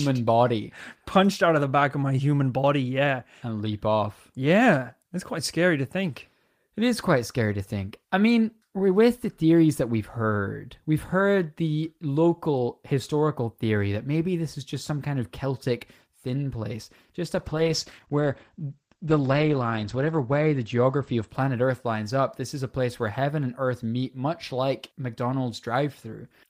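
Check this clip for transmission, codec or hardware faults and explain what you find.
There's one problem here, a call bitrate drop from 17.45 s to 21.42 s. The bandwidth estimate sank, so the encoder was told to spend far fewer bits. The sound fits a fall from about 32 kbps to about 14 kbps, bottoming out for roughly 2.7 s. Opus then codes more coarsely and drops the top end, so the speech loses everything above 8 kHz instead of reaching 20 kHz. It goes muffled and rough until the rate climbs back.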